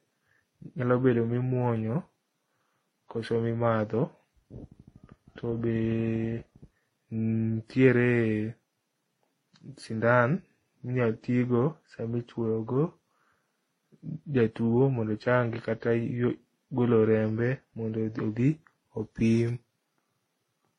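Throughout the speech, nothing is heard above 11.3 kHz. Mixed codec artefacts pile up. This suggests transcoding between lossy codecs, likely ending in WMA.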